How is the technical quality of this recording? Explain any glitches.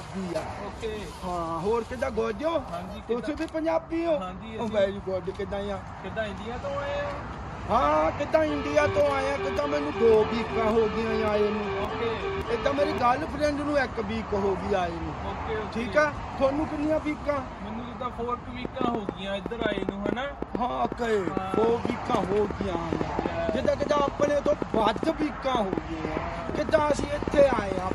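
The recording has one clear glitch in its final stretch. A train of clicks runs from 18.65 s to 27.92 s: around a hundred similar pulses at about nine per second, unevenly spaced and peaking roughly 15 dB above the sound, likely from electrical interference or a faulty connection or power supply. They are heard as irregular ticking over the audio, including its pauses.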